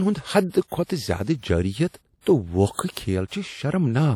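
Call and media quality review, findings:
WMA compression, whole clip: ringing, washy speech, hiss rising and falling with level, plainly audible. Likely a long-block transform encoder, quantisation noise smeared over tens of ms, weak detail zeroed. Damage level fits a low rate around 48 kbps. Nothing above about 20.1 kHz.

Pre-echo at 0.49–0.54 s, 0.67–0.72 s, 0.84–0.89 s and 2.91–2.97 s: brief hiss ahead of sharp onsets, attacks softened. Spreads of 46, 51, 51 and 56 ms. Same codec: block-wide noise sized for the loud attack leaks into the quiet gap before it.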